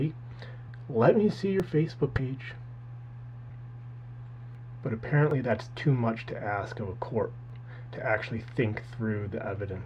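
At 1.60 s the sound skips abruptly, with about a twentieth of a second missing and the two sides butted together. This is likely audio missing between chunks, lost as a recorder working in 3 s blocks closes one and opens the next. From 2.14 to 2.19 s the audio jumps forward roughly 70 ms, which is compressed frames skipped: whole coded frames went unplayed. The same chunk-boundary skip returns at 4.55 s, spaced 3 s after the first. Another short frame skip, losing only a few hundredths of a second, occurs at 5.31 s. The third regular chunk skip falls at 7.50 s.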